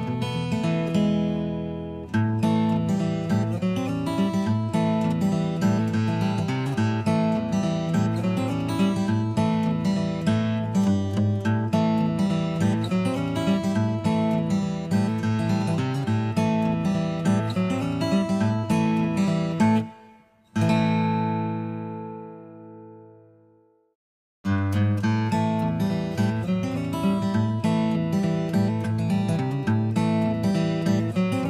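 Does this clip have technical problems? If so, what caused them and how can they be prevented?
No, the signal shows no technical problems that can be heard anywhere in the clip, so there is nothing to trace back to a cause or to prevent.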